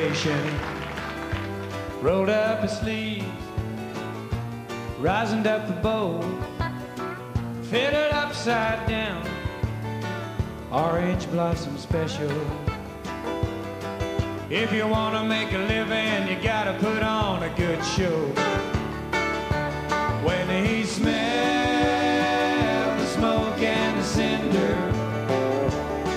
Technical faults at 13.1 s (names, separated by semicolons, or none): none